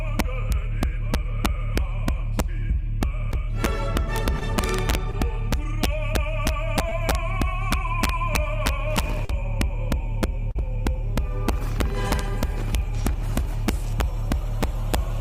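Integer overflow runs through the whole clip. The signal is driven about 5 dB past full scale, and instead of being limited, each peak over the ceiling wraps around to the opposite extreme of the integer range. Only a small fraction of samples, under one percent, cross the limit, so the damage comes in bursts. The loudest moments break into violent, snapping cracks that are far harsher than ordinary clipping.

Short concealed packet loss appears at 3.31, 4.39, 5.11 and 6.89 s, with gaps of about 20 ms each, and again at 9.25 and 10.51 s, where about 40 ms is missing. In each case audio failed to reach the decoder in time, so the receiver extended the preceding sound to cover the hole and then blended back into the real signal. Each one is heard as a brief smear or wobble.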